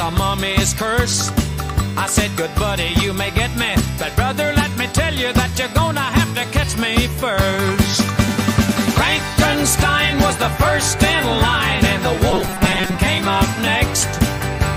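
From 12.31 to 12.95 s the sound collapses into a rigid, metallic buzz pitched at 188 Hz, tracking the underlying audio only loosely: robotic sound from repeated short buffers. The likely cause is audio arriving too seldom, so the playback fills the gaps by looping its most recent fragment, about 5.3 ms long to match that pitch, while the real material is dropped. Roughly half of the passage is repeated rather than new.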